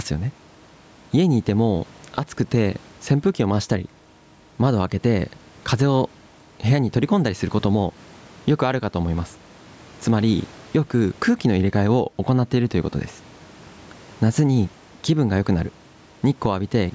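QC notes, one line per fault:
Throughout, gain pumping: gain swings around 10 dB under loud bits, likely mic gain set too hot into a fast limiter.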